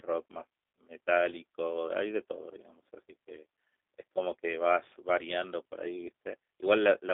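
From start to finish the speech carries G.729 codec damage, plainly audible. The band runs only from about 300 Hz to 3.6 kHz, and within it the sound is rebuilt from a vocal tract filter, a pitch predictor and a few sparse pulses per frame, which fits the 8 kbit/s G.729A variant. That leaves a rough, buzzy, slightly synthetic texture. A simple telephone band-limit would sound muffled but natural, whereas this pulse-built roughness persists in every syllable.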